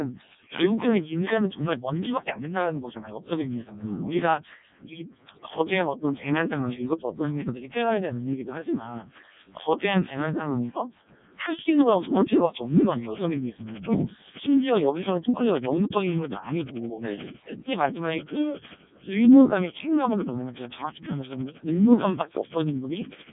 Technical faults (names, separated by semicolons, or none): Codec 2 vocoder